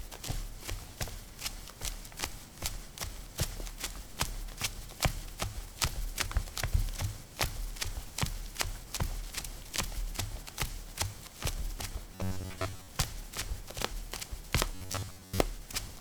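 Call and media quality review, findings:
Robotic sound from repeated short buffers, 12.15–12.88 s and 14.75–15.39 s. Audio delivery likely stalls, so playback loops a short chunk, about 10.7 ms, while most real audio is skipped. The repetition forces a rigid, metallic 93.8 Hz buzz onto the sound.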